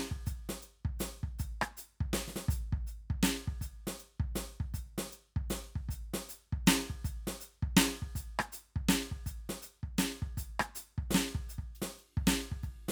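No technical faults can be heard anywhere in this music recording, which carries through without any dropout, glitch or other break in the signal.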